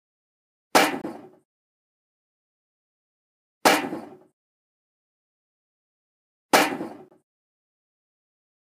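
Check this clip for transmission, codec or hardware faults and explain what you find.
There is one fault type, a gap between chunks, occurring twice. At 1.02 s and 7.08 s, the sound breaks for 23 ms. The audio arrived in 2-second chunks, and silence entered at these joins.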